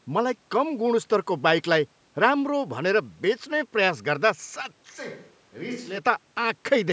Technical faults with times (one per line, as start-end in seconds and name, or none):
4.94-5.97 switch to a distant microphone